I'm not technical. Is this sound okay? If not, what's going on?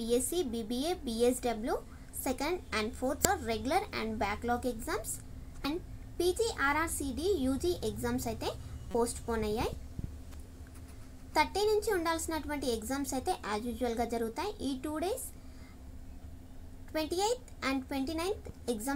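No. There are three brief glitches, at 3.25 s, 5.65 s, and from 8.91 to 8.95 s, each heard as a quick chirp or blip. This is damaged data in a compressed stream. A few bits of the stored file got scrambled, so the player couldn't read those spots properly and spat out a burst of garbled noise before finding its place again. The last one lasts a little longer.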